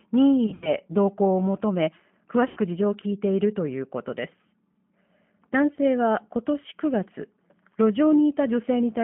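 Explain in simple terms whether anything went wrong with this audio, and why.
Two problems are audible. Throughout, the speech has passed through the G.729 codec, a low-rate phone codec that rebuilds the voice from a simplified model. Nothing below about 150 Hz or above 3.4 kHz survives, so the voice sounds thin, muffled and plainly rough or synthetic.

There is also VoIP packet loss concealed by the speech codec, at 0.46 to 0.74 s, 2.48 to 2.59 s and 5.75 to 5.79 s. Chunks of audio went missing. The decoder filled each gap by stretching the last sound into a buzzy tone or coloured noise that fades, and the voice stays weak for a moment afterward.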